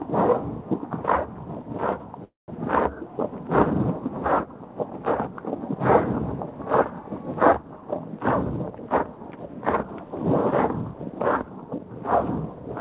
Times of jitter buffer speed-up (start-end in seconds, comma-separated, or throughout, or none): 8.60-10.08, 10.91-11.86